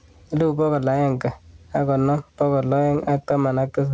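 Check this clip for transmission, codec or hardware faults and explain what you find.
One fault runs through the whole clip: gain pumping. The gain swings by around 10 dB, squashing loud and soft parts closer together. The likely cause is a fast limiter clamping input gain set far too high. Unlike a noise gate, pumping does not cut to silence. The call path itself can be heard through content stopping at 8 kHz, which fits a G.722 wideband codec.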